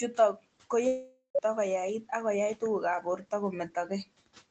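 From 0.13 to 0.45 s the speech goes faint and swallowed in spots, sinking by up to about 17 dB over roughly 150 ms in total. This is speech cut by the noise suppressor. It misjudged these quieter parts as background and pulled them down along with the room noise. The room noise sits about 24 dB below the speech, and the audio band stops at 8 kHz.

At 0.87 s the sound turns into a smeared, fading buzz for almost half a second, followed by a short hush of about 80 ms before the speech returns at 1.37 s on "koyait ako yai tuguk". The cause is likely a long network dropout. Roughly 480 ms of audio never arrived, so the receiver stretched the last sound it had to cover the gap. That part of the speech is simply gone.

From 3.02 to 3.32 s the noise suppressor cuts the speech again, more gently this time. The dip is about 11 dB over roughly 100 ms, which leaves the speech there sounding swallowed or faint.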